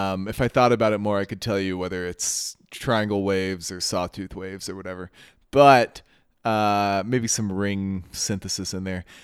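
Nothing technically wrong turns up in this bit of speech; there's just no fault here to point to.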